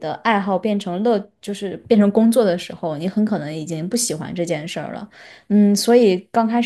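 No audible technical faults here.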